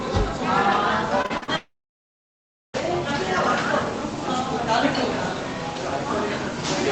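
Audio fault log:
1.22–1.50 s, repeated packet loss (robotic sound): the audio turns choppy, stuttering through four short holes, the longest about 40 ms. Packets kept going missing or arriving late, and each gap was patched by stretching the last bit of sound that did arrive, so roughly half of this 0.28 s stretch is synthetic fill rather than real audio. The next hole comes soon after each patch, leaving pieces missing.
1.56–2.76 s, long network dropout: after a brief buzzy continuation the sound fades and goes essentially silent for about 1.05 s, then resumes at 2.76 s with the missing section simply gone. The receiver first carried the last sound forward, then gave up and let it decay to near silence. A run of packets that never got through is the likely cause, with about 1.2 s of audio lost in all.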